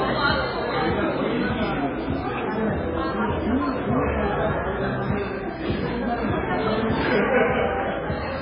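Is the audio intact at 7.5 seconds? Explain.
No. At 7.5 s the audio carries the same damage heard throughout: nothing above about 5.2 kHz, with a watery, swirling texture and smeared attacks. This is likely MP3 compression at a very low bitrate, near 16 kbps, where the encoder cuts the treble and toggles weak frequency lines from frame to frame.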